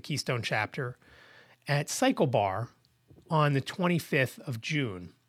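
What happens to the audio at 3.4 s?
Nothing goes wrong at 3.4 s; the speech runs through that moment without any audible fault.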